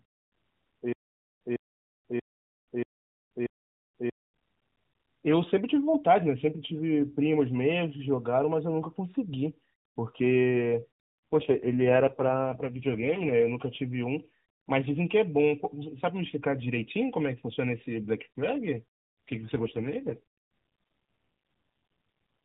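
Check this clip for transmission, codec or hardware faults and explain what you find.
Two faults stand out, both AMR rate drops. They run from 11.33 to 13.34 s and from 18.74 to 20.20 s. The bandwidth stays the same and nothing drops out. The link likely weakened, so the codec traded speech bits for error protection. The speech turns buzzy and synthetic, which points to a fall from 12.2 to 4.75 kbps. Between the drops, the AMR narrowband codec shows only light coding damage.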